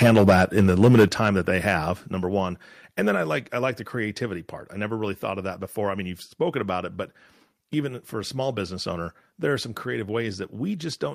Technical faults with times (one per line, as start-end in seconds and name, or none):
0.02-1.28 microphone overload
0.07 microphone volume stepped down
1.08 microphone volume stepped down
2.10 microphone volume stepped down